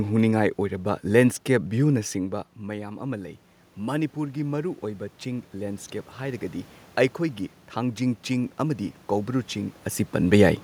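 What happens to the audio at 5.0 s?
At 5.0 s the automatic gain control is rising, a slow climb from 2.13 to 6.49 s after the talker moved away around 2 s and the input fell by about 13 dB. Gain creeps up about 7 dB, and room noise swells along with the voice, which marks it as gain riding rather than the talker returning.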